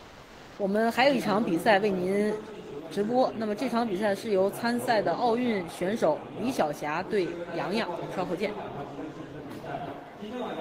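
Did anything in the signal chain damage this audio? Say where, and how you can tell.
Yes, at the codec stage. From 0 to 0.57 s, the background, about 24 dB below the loud parts, is a steady, featureless noise at the same level rather than real ambience. This is likely comfort noise in place of the background, synthesised while discontinuous transmission paused the stream.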